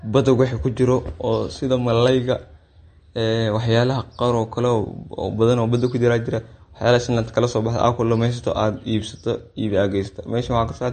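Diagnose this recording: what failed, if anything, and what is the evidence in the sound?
Codec stage. Throughout, nothing sounds above 8.6 kHz and the damage is plainly audible. Likely MP3 compression, fitting about 40 kbps, cutting treble to save bits.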